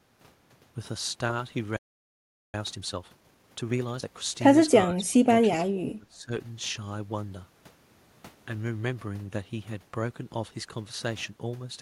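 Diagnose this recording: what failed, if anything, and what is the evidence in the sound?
Playback stage first: the speech stops dead at 1.77 s and stays silent until 2.54 s, a gap of about 0.77 s, then carries on. That's a playback stall. The sound just halts mid-flow rather than fading or glitching, which most likely means the player ran dry on data or its audio thread got blocked, so nothing reached the output until it recovered.

Right after that, from 2.54 to 4.08 s, the speech comes out hurried at 1.5 times normal speed while the pitch stays put. That's time-compressed catch-up, still in the playback stage. Having fallen behind, the player works through its backlog by dropping short slices of audio and cross-fading across the joins. That shortens the timeline without the chipmunk effect you'd get from simply playing faster.

The third fault is in call processing: speech suppressed in double talk, twice, from 4.87 to 5.49 s and from 5.68 to 6.32 s. 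In both spans the speech sinks hard, around 25 dB at its deepest. The likely cause is the echo canceller seeing both ends active at once, failing to tell this talker from loudspeaker echo, and clamping down on the whole signal.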